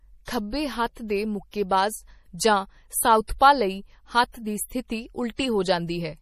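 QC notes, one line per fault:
Throughout: MP3 compression. Nothing is present above 15.1 kHz, and the codec damage is plainly audible as a watery, swirling texture with smeared consonant attacks. The likely cause is MP3 encoding at a bitrate near 40 kbps, which forces the encoder to cut the treble and drop weak spectral lines.
5.36–5.39 s: pre-echo. A short hiss runs for 27 ms ahead of a sharp attack, which comes across softened. The codec spreads quantisation noise evenly over its whole transform block, so noise sized for the loud onset spills into the quiet moment just before it.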